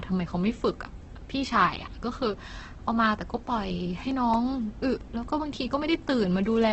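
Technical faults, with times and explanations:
Throughout: Opus compression, likely the cause of the grainy, rough texture on this speech. Nothing comes through above about 8.2 kHz, and the tonal parts of the voice turn noisy instead of clean. That fits Opus running its music-style band coding at a very low rate, somewhere near 12 kbps. With so few bits it keeps each band's energy but patches in folded or noise content, so the damage is heavy but not hollow or swirly.
4.11 to 5.23 s: CD scratch ticks. Six ticks or micro-dropouts over about a second, so roughly five a second, the biggest lasting only a few milliseconds. That regular spacing is the disc coming round once per turn. Each pass over the blemish loses more data than the error correction can rebuild, so the player interpolates or mutes those samples and leaves a brief click.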